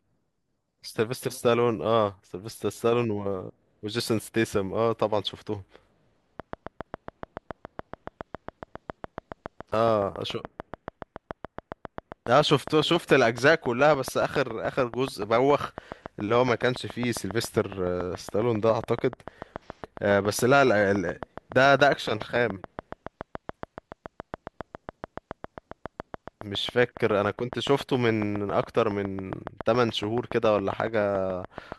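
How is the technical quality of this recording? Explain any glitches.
The recording is marred by a train of clicks from 6.40 s to 31.73 s: about 200 regular pops at 7.15 per second, peaking around 10 dB above the speech. Likely from electrical interference or a faulty connection or power supply, they tick through pauses too, and their near-identical shape and steady pace distinguish them from random crackle.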